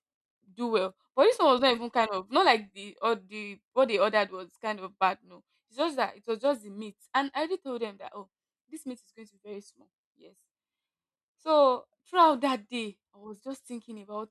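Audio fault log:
No audible faults detected.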